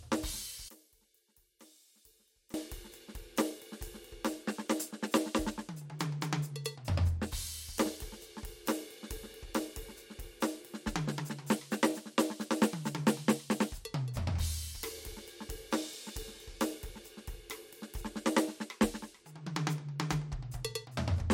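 From 0.69 to 2.54 s the music drops by about 25 dB to a faint copy. Its centre almost vanishes. This is likely one channel inverted. One side's reversed polarity cancels whatever both channels share once they are summed.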